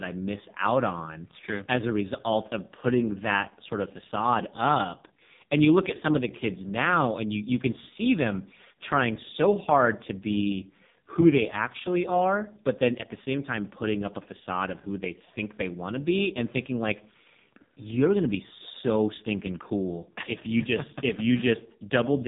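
From start to finish the speech has been squeezed through the AMR narrowband mobile codec, the AMR-NB speech coder used on 2G and 3G calls. It rebuilds the voice from a vocal-tract model fed by a handful of pulses per frame, and the heavy damage here suggests its lowest mode, around 4.75 kbps. Nothing above about 3.8 kHz survives, so the speech sounds muffled and phone-like, with a buzzy, synthetic edge throughout.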